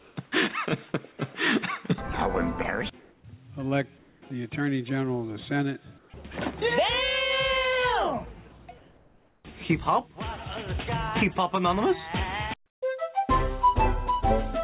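Call-band audio with nothing above 4 kHz, which fits G.711 at 64 kbps, shows comfort noise in place of the background at 0.00–0.16, 3.00–3.24, 3.98–4.22, 5.98–6.10 and 8.78–9.44 s. In these pauses, where the background sits about 33–35 dB below the loud parts, the real room tone gives way to a steady, featureless hiss, level at first and about 2 dB quieter from 3.98 s. This is likely discontinuous transmission, with the receiver synthesising noise while the sender stays quiet. At 0.92–0.94 s there is sound dropped by the voice detector. The detector likely treated a faint passage as background, so roughly 10 ms of it is lost under that same synthetic noise before the sound resumes.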